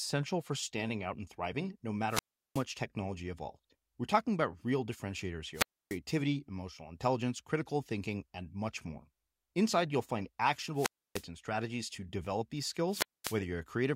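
Wireless microphone squelch dropouts occur at 2.08–2.64 s, 5.53–5.99 s, 10.74–11.25 s and 12.88–13.39 s. Each time, the FM radio signal fades and hiss rises. The receiver's squelch then cuts the speech to near silence for 369, 287, 295 and 222 ms before it returns.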